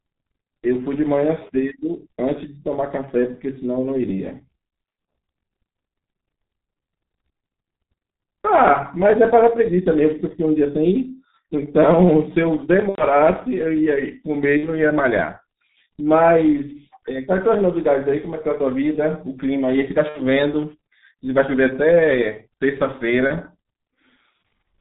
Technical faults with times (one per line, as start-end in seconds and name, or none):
0.00-24.80 G.723.1 codec
12.89-13.05 VoIP packet loss concealed by the speech codec
14.57-14.76 VoIP packet loss concealed by the speech codec
20.09-20.22 VoIP packet loss concealed by the speech codec
23.27-23.31 VoIP packet loss concealed by the speech codec